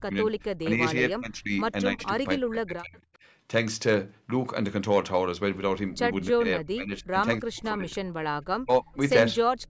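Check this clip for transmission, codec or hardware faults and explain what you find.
Two call-processing faults are present: repeated speech suppressed in double talk, and one brief echo leak.

Speech suppressed in double talk occurs at 0.0–0.27, 0.6–1.52, 1.93–2.22, 2.38–3.04, 6.33–7.16, 7.4–8.11 and 8.57–8.87 s. The voice sinks by roughly 20 to 40 dB, most deeply near 8.6 s, or breaks into pieces. The likely cause is an echo canceller that cannot separate the talker from loudspeaker echo and ducks both. These are gain dips, not added sound, which distinguishes them from a leak.

An echo leak occurs at 1.99–2.04 s: a faint delayed copy of the voice arriving 316 ms late, about 25 dB below the speech. It is likely residual loudspeaker pickup that the loudspeaker side's canceller failed to remove. Unlike suppression, it adds a ghostly repeat rather than removing level.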